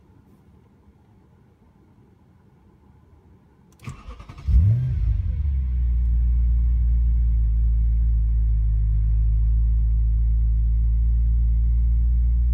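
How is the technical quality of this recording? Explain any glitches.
No glitches or faults are audible anywhere here.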